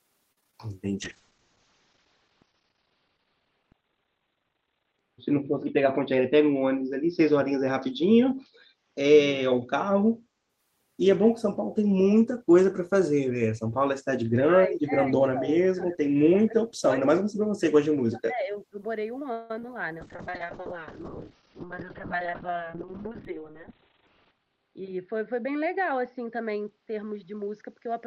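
From 0.32 to 0.54 s there is repeated packet loss with a robotic sound. Five separate gaps, the longest 45 ms, were filled by extending the previous sound, so 44% of that stretch is synthetic continuation. The result is choppy and robotic, with about 40 ms of real audio missing.

A call bitrate drop runs from 1.03 to 10.55 s. The encoder's target fell from 32 kbps to 9 kbps and stayed at the floor for about 4 s. The coded bandwidth narrowed from 20 kHz to 4 kHz, which leaves the speech muffled, coarse and watery.

Inside that stretch, from 5.77 to 6.22 s, a jitter buffer speed-up plays the audio at 107% speed. The receiver trimmed roughly 40 ms in short pitch-period slices to shrink excess buffered delay. The pitch stays the same, but the speech sounds slightly hurried.

Between 14.67 and 18.79 s the speech is repeatedly pulled down, in spans at 14.67 to 15.14 s, 15.33 to 15.99 s, 16.45 to 16.87 s, 17.21 to 17.64 s and 17.88 to 18.79 s. 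The drops are roughly 25 to 35 dB deep, so the voice dips or partly vanishes. This is likely speech suppressed in double talk by the echo canceller.

At 19.32 to 19.51 s a 175 ms call audio freeze appears as a held, fading continuation of the last sound, with nothing lost afterwards. The likely cause is delayed packets draining the jitter buffer, which pushes the playback delay up by 175 ms.

Right after it, from 19.59 to 19.64 s, come two short concealed packet losses. Together they drop about 30 ms of audio, which is patched by extrapolation and heard as a brief smear or wobble.

A second call bitrate drop runs from 20.0 s to the end. The bitrate falls from 32 kbps to 6 kbps and sits at the lowest rate for about 3.3 s. Bandwidth shrinks to 4 kHz, so the speech again turns dull and rough.

Near the end, from 27.23 to 28.05 s, a second jitter buffer speed-up plays the audio at 106%. It removes roughly 70 ms, so the closing speech sounds slightly rushed at an unchanged pitch.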